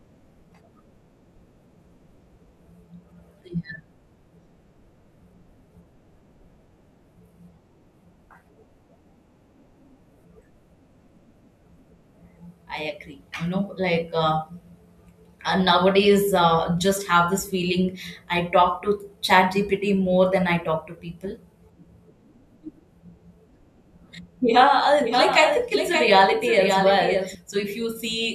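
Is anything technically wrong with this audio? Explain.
Yes. Doubled audio track, 25.01 to 27.35 s: a copy about 5 dB quieter, likely from a slower capture path, trails about half a second behind and cuts in and out abruptly.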